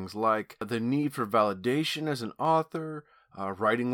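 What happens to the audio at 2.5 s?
At 2.45 s, just after "for validation as an", the stream likely lost a couple of samples, a tiny fraction of a millisecond. These dropped samples make the waveform jump straight to a later value, producing one sharp click with no sound missing.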